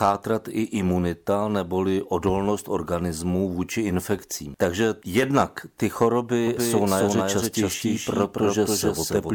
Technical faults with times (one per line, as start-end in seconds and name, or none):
6.47-9.35 doubled audio track